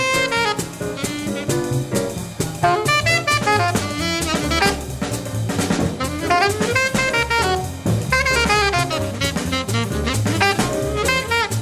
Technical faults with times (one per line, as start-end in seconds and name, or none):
none